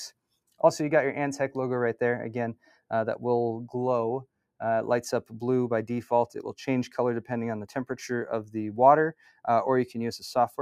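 A speech-tuned noise suppressor was left running on the whole clip, a case of a noise suppressor applied to music or sounds. It treats steady tones, ambience and decaying tails as noise and keeps pulling them down while letting sharper onsets through. Its gain never settles, swinging by roughly 5 dB, so the sound pumps and flutters, held parts sag between attacks, and the space around the sound thins out.

From 2.57 to 2.84 s, and again from 9.13 to 9.47 s, the suppressor misjudged the sound and clamped down much harder than elsewhere, producing sound cut by the noise suppressor. The first cut goes as deep as about 18 dB over roughly a fifth of a second. The second reaches about 15 dB and lasts close to a third of a second. In both places the sustained or fading material sinks in level or has its decay cut short.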